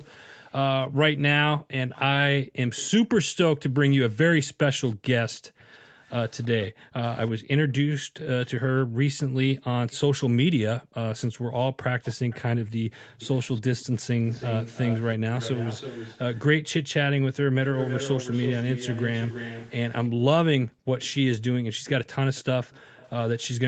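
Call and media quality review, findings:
Background gated by the echo canceller: room sound ducks hard, about 40 dB, at 1.58–2.58, 4.48–8.99, 10.79–11.53 and 20.1–20.88 s; shallower dip, about 8 dB, at 17.41–17.56 s. Canceller suppressing the mic during loudspeaker playback, then letting go.

Echo leak: delayed copy of the speech trailing by 323 ms, faint (about −25 dB) at 1.93–6.67 s, much stronger (about −10 dB) at 8.78–23.47 s. Likely a loudspeaker-side echo canceller not removing all its mic pickup, returning residual pickup.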